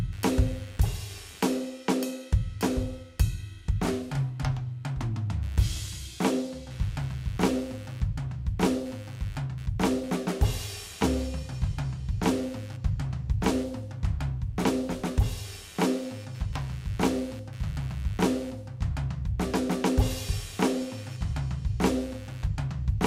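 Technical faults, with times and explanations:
Throughout, computer activity noise: a buzzy pulsing at roughly 100 Hz, fairly far under the music, as processor load swings leak through a shared ground into the audio.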